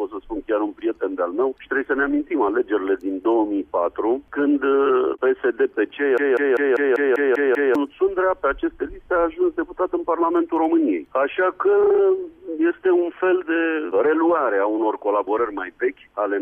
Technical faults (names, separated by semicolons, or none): broken-record loop